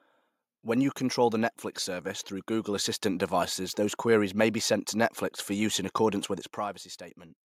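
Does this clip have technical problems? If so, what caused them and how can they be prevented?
Yes. From 1.84 to 3.87 s the level climbs by about 4 dB. This is automatic gain rising. The gain control judged the input too quiet and turned itself up slowly, over about two seconds. Voice and background swell together, so the room noise grows along with the speech. The rise settles just before "queries may be sent". To prevent it, disable automatic gain control and set a fixed input gain suited to the speaker before recording.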